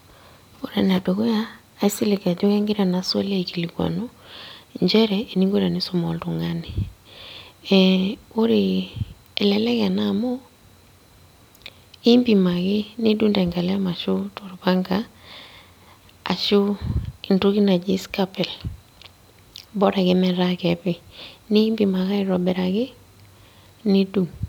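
No technical faults turn up anywhere in this speech recording, so there's nothing here to flag.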